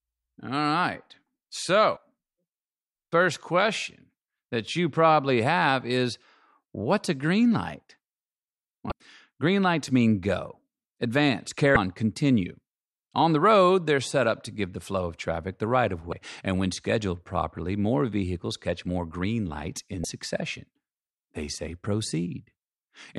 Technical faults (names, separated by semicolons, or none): damaged data in a compressed stream